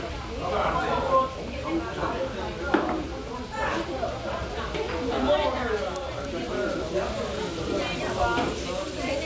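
Nothing goes wrong anywhere in this recording; the sound simply runs along from its first moment to its last with no technical trouble to point out.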